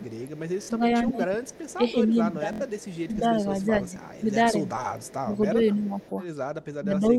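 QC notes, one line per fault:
0.00–6.02 s and 6.80–7.18 s, speech suppressed in double talk: the voice repeatedly sinks and thins out, dipping by about 10 dB in the first stretch and about 15 dB in the last, for roughly three seconds and under half a second of affected sound. Both ends were likely talking at once, so the echo canceller could not tell this talker from returning loudspeaker sound and turned everything down together.
0.05–4.23 s, 4.91–5.15 s and 5.84–6.10 s, echo leak: a faint, delayed copy of the voice trails behind it by 279 ms, sitting about 30 dB under the direct speech, as a long smear at first and then as two short scraps. The likely cause is a far end playing the call on a loudspeaker whose echo canceller let part of its microphone pickup through and sent it back.
0.63–0.70 s and 2.53–2.62 s, Bluetooth stutter: the sound briefly catches and buzzes as a tiny slice replays in a rapid stutter, then jumps ahead as though it had kept playing. 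The gaps are 46.4 ms and 69.7 ms, which fits two and then three lost or late frames on the wireless link, with the receiver repeating its last buffer until fresh audio arrived.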